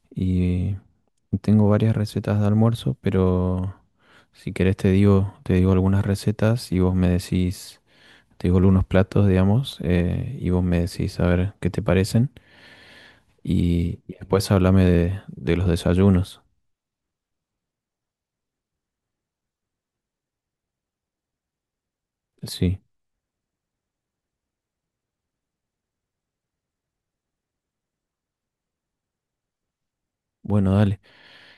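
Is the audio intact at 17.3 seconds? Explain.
Yes, the audio is intact at 17.3 seconds, with no audible fault at that moment.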